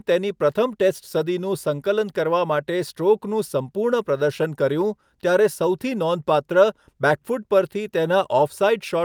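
No technical faults can be heard anywhere in the speech. Nothing in the recording changes in a way that points to a problem in how it was captured, processed or carried.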